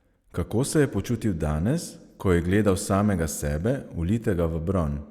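No technical faults are audible.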